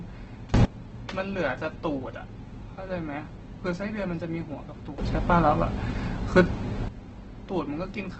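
All the way through, the speech carries heavy Opus compression, grainy and rough with the top end cut, which fits a low bitrate around 12 kbps in CELT mode. There are two sudden gain jumps, likely unramped digital level changes: from 0.54 to 0.65 s everything leaps up about 23 dB, and from 4.98 to 6.89 s about 12 dB, background noise included.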